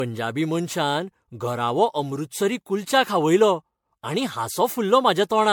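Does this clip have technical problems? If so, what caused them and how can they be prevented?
Yes. Generation loss runs through the whole speech clip. The sound is swirly, smeared and hollow, with softened consonant attacks and nothing above about 19.9 kHz. This is likely the result of lossy MP3 encoding repeated around ten times at a rate that points to 96 kbit/s. Each new pass quantises the already damaged signal on a shifted frame grid, so noise and spectral gaps build up. Prevent it by editing from a lossless master and encoding to MP3 only once at the end.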